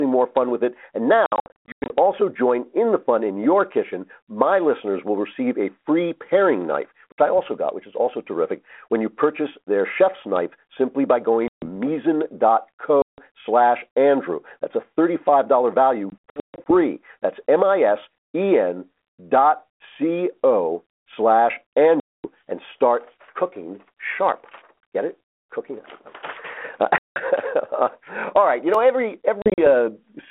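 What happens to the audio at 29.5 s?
Packet loss on an ADPCM call, 29.42 to 29.68 s. Silent gaps up to 40 ms. The decoder's predictor loses step, so speech returns distorted.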